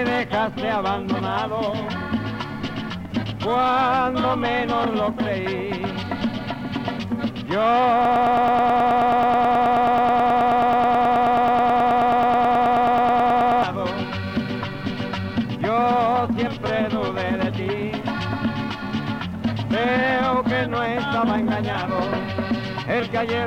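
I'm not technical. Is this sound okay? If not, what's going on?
No. From 8.05 to 13.63 s there's a broken-record loop: one 0.11-second snippet repeats back to back, likely from a stalled player, and the intended sound is lost.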